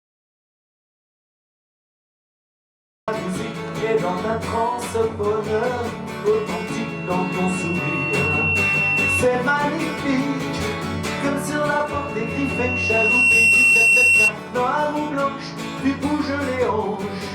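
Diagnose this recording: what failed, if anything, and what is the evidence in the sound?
Silence, with no room tone, runs from the start to 3.08 s. This is an audio dropout to silence, likely a lost input link before the recorder.

A 2.7 kHz tone swells over a second or two into loudspeaker feedback squeal at 6.33–9.30 s and 11.85–14.33 s. The microphone–loudspeaker loop exceeded unity gain.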